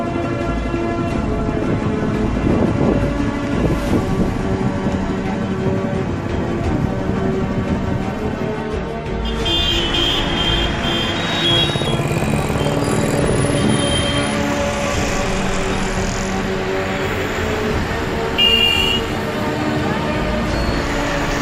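No technical faults occur at any point in the audio.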